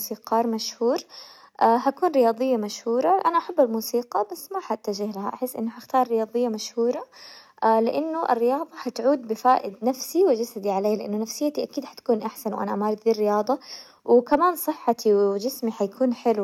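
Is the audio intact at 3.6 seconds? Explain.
No. Hard clipping occurs at 3.60 s, between "انا احب" and "الموسيقى بس ما حتجهلها": a speech peak reaches the stage's ceiling, with overdrive of about 0 dB, so its top is sliced flat. The squared edge adds high harmonics, heard as a brief crackle.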